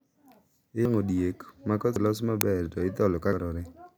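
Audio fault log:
0.85 s, 1.96 s and 3.33 s, dropped buffer (overrun): the speech jumps forward, with no gap, just before "diek ma" at 0.85 s and right after "diek ma" at 1.96 s, each skipping about a tenth of a second. At 3.33 s roughly 300 ms vanishes. The likely cause is samples not being collected before the hardware overwrote them, so the surviving edges are butted together.
2.41 s, uninitialised buffer: a sharp, loud crack lasting about 2.9 ms, which fits a 128-sample buffer played out before any audio was written into it. The stale memory contents were reproduced as samples, producing a harsh crack.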